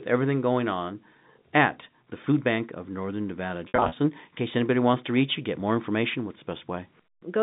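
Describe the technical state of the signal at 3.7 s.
Packet loss with pitch repetition spans 3.68 to 3.92 s, just before "in case anybody wants". About 160 ms of audio is lost in short gaps across 240 ms, the longest 60 ms. The receiver repeats the last pitch period, so the sound briefly holds as a buzzy, frozen tone. On a spectrogram this appears as flat, unchanging harmonic stripes; the waveform shows identical repeated cycles that taper in level. The narrow telephone band, 150 Hz to 3.7 kHz, is visible throughout.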